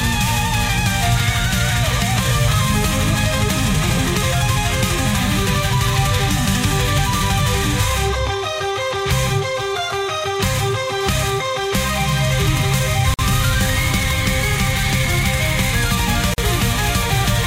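Separately encoded pieces were joined without trimming the encoder's start-up delay and end padding, leaving a gap at a join of encoded pieces. At 13.14 s the sound drops out for 48 ms, and at 16.34 s for 43 ms, each with smeared edges before it resumes where it left off.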